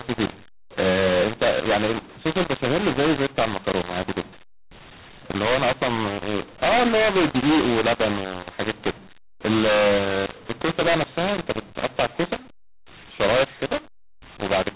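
mu-law and A-law mixed up, throughout: A-law-coded telephone speech is decoded as mu-law, scrambling levels into harsh distortion, with quiet samples lifted so pauses fill with noise.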